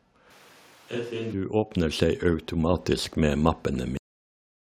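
At 1.71 s the level jumps by about 7 dB in one go, and at 2.73 s it climbs again by about 4 dB. That's the microphone volume being stepped up: the call software decided the mic was too quiet and raised the device's input gain. Because the change happens before anything else in the chain, the voice and the room noise get louder together, so the background lifts right along with the talker. It's an abrupt shelf, not a gradual fade.

Then there's a cut-off end at 3.97 s. The speech just stops partway through a sound and drops straight into digital silence for the rest of the clip. There's no tail and no room decay, because the final buffers never got written out or played. It sounds like someone yanked the cable rather than the talker finishing naturally.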